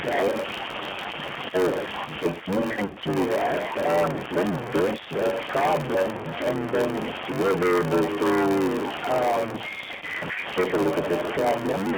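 A speech recording carrying four distinct faults. The signal has passed through a G.729 codec at 8 kbit/s, which rebuilds speech from a vocal tract filter, a pitch predictor and a few pulses per frame. The line band runs from about 200 Hz to 3.5 kHz, and the coding damage is plainly audible as a rough, slightly synthetic voice. Distortion from a stuck bit runs through the whole clip, and the pauses are filled with noise rather than silence, which points to a stuck bit as the likely cause: one data bit held at a fixed value, throwing about half the samples off by that bit's weight. Throughout, a block size mismatch (padded) is at work, because one stage writes shorter blocks than the next reads, which fits a 512-sample read. The shortfall is filled with zeros, so a tiny gap lands in every block. That produces a steady buzz at 93.8 Hz and stretches the audio to 0.861 times normal speed while the timbre stays roughly where it was. 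On top of this comes VoIP packet loss concealed by the speech codec. From 2.71 to 2.98 s, about 120 ms of audio is missing, scattered over 200 ms with a longest run of 80 ms. From 9.92 to 10.05 s, another 80 ms is lost. In both places the decoder extends the last pitch and filter with falling gain, so the voice smears into a fading buzzy tone or coloured noise and stays weak briefly after the packets resume.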